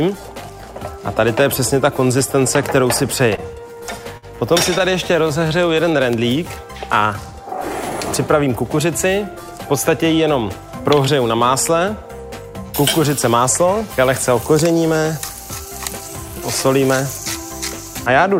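From 3.35 to 4.25 s, repeated stalls (stutter): packets arrived late five times, draining the jitter buffer. The receiver stretched the last sound across about 110 ms of gaps, the longest 50 ms. Nothing is lost, but the audio drags and stutters.

From 5.13 to 5.97 s, a jitter buffer slow-down: with its reserve running low, the receiver repeated pitch periods, adding 75 ms. The sound plays at 92% speed with the same pitch and a drawn-out quality.

Two jitter buffer speed-ups follow, where an overfull buffer made the receiver trim short pitch-period pieces. From 8.35 to 9.05 s, roughly 50 ms was cut and the audio runs at 106%. From 15.40 to 16.29 s, about 40 ms was cut at 104%. The first passage sounds slightly hurried, and both keep unchanged pitch.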